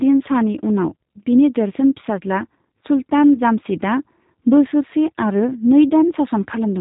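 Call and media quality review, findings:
G.729 codec, throughout: speech cut off above 3.8 kHz, with plainly audible rough, buzzy, synthetic texture from filter-plus-pitch-predictor resynthesis on sparse pulses, which fits an 8 kbit/s G.729A leg. Unlike plain G.711 narrowband, the texture itself is damaged, beyond the missing highs.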